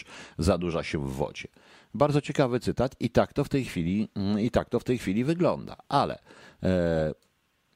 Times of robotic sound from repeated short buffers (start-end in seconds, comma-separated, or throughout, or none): none